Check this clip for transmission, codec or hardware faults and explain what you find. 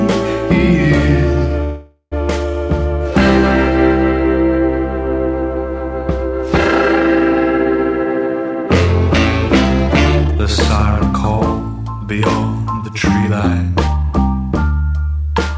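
Three faults turn up: one call audio freeze and two jitter buffer speed-ups. The call path itself carries nothing above 8 kHz, which fits a wideband call codec such as G.722.

Call audio freeze, 1.64 to 2.14 s: the likely cause is packets held up in transit, so the jitter buffer ran dry. The receiver stretched the last sound into a fading buzz for about 0.48 s, with roughly 50 ms of near-silence. When the audio resumes it continues exactly where it stopped, so nothing is lost, but everything after arrives about 0.48 s later.

Jitter buffer speed-up, 10.16 to 10.40 s and 12.83 to 14.13 s: the buffer held more audio than its target, so the receiver cut out short pitch-period slices repeatedly to shed delay. Each pass removes roughly 0.2 s. The first is brief and sharp, at 180% speed, and sounds abruptly rushed. The second is gentler, at 115% over about 1.3 s, and gives a mild hurried feel at unchanged pitch.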